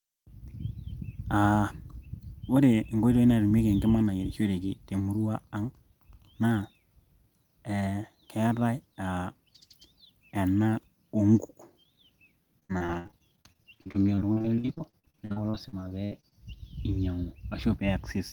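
Repeated packet loss (robotic sound) runs from 12.59 to 16.36 s: dozens of short dropouts, each under about 61 ms, patched by extending prior sound, leaving choppy speech.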